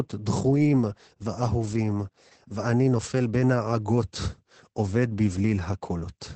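Speech is affected throughout by heavy Opus voice compression. Nothing survives above 8.7 kHz, and the coarsely coded SILK excitation makes it muffled, hoarse and faintly robotic, which fits a bitrate near 10 kbps. A plain low-pass filter would dull the sound without adding this grainy, robotic texture.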